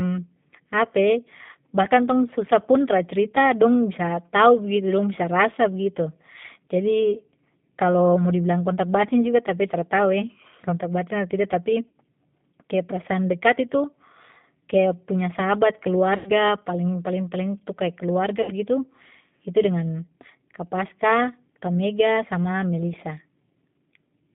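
The whole recording carries the G.729 codec sound, and its damage is plainly audible. The speech is band-limited to roughly 150 Hz to 3.6 kHz. Nothing bright survives above that. The coder rebuilds each frame from a filter, a pitch guess and a few pulses. That gives the voice a rough, slightly synthetic texture. The thin, grainy quality points to an 8 kbit/s G.729A stream.

Three gaps show VoIP packet loss concealed by the speech codec. The first runs from 11.88 to 11.95 s and covers about 60 ms. The second, from 16.17 to 16.31 s, is longer, about 90 ms. The third spans 18.42 to 18.52 s, again about 60 ms. Each fits two or three lost packets. The decoder stretches the last sound into a buzzy tone or a coloured noise that fades. The voice stays weak and smeared briefly after each gap.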